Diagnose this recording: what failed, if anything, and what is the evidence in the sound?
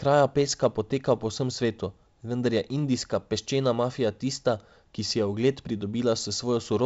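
Nothing failed here; the speech just carries the usual character of G.722 wideband telephone coding, with the top end running out around 7.7 kHz and a faint texture that fits the 56 kbit/s mode, so no stage in the chain gives any sign of trouble.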